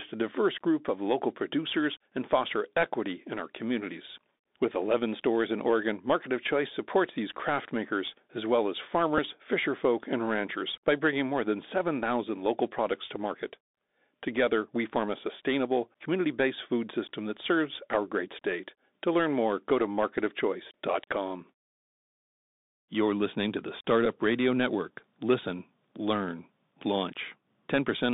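Speech here comes through the Bluetooth CVSD headset codec the whole way, and the damage is plainly audible. The band runs only from about 200 Hz to 3.7 kHz, so everything sounds boxed-in and phone-like. CVSD sends just one up-or-down bit per sample with an adapting step, which fits a 64 kbps link. Loud, bright sounds outrun that step and break up, sibilants go scratchy, and there's a grainy hiss sitting under the speech. On top of that there are three short Bluetooth headset packet repeats, at 7.39 s, 9.18 s and 24.05 s. When a voice packet doesn't make it across, the chip decodes the previous packet's bits again. The first gap is about 3.8 ms, which points to a single lost packet and gives just a small tick. The later two are about 7.5 ms each, consistent with two packets in a row.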